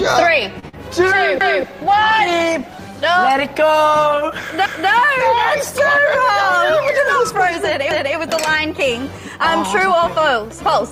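Right at the start the audio catches twice in quick succession. From 0.59 to 0.65 s a sound is held for about 32 ms: a short stall from a late packet, where the jitter buffer ran dry and the receiver stretched the last sound until the packet turned up, adding that much delay but losing nothing. Just after, from 0.69 to 0.75 s, a brief smear replaces about 40 ms that never arrived, a short concealed packet loss where the decoder extended the preceding sound to bridge the gap before blending back in. From 1.0 to 6.63 s the sound turns coarse, as a call bitrate drop pushed the Opus encoder from 32 down to 17 kbps, holding the lowest rate for about 4.1 s, which thins the coding and trims the top end. Three stutters follow at 1.41–1.66 s, 4.66–4.91 s and 7.91–8.16 s, each replaying a 250 ms stretch: these are overlapping chunks, with the audio handled in 3 s blocks that each begin before the last one finished, so every join repeats material. 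Also, from 6.48 to 6.98 s the sound rushes at unchanged pitch, running at 106% speed. This is a jitter buffer speed-up, trimming a few hundredths of a second in tiny pitch-period slices to cut excess buffered delay.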